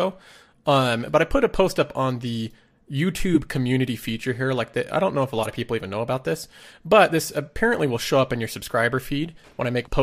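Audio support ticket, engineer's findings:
Corrupt frame decoded, three events. 3.34–3.37 s, just before "community feature here": loud artifact, about one frame long, peaking near -5 dBFS. 5.36–5.46 s, between "don't know if a" and "of people even know": artifact spanning roughly four frames, about -15 dBFS. 7.77–7.79 s, between "about this but this" and "will show up in": faint artifact, one frame, about -25 dBFS. The decoder played bit-flipped frames, and the misread gains and codes put energy at the wrong frequencies. Spectrogram: frame-wide vertical smears off the speech harmonics. Waveform: short spikes.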